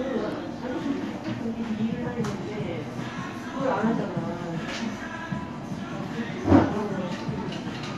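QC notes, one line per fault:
No faults are present in this recording of sounds, and its signal carries no technical defect at any point.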